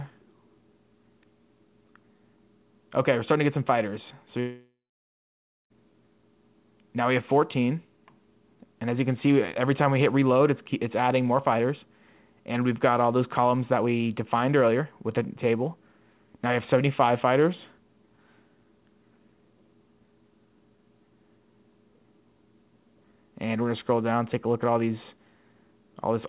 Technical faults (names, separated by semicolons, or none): long network dropout